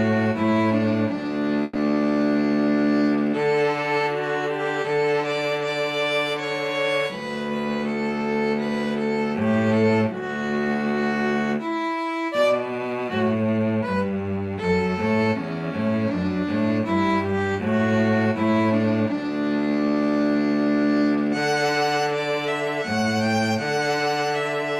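Several consecutive packets failed to arrive in time around 1.63 to 1.77 s, a burst of packet loss. The receiver stretched the last sound across about 120 ms, fading it into a held tone or hiss, then resumed with that stretch of audio missing.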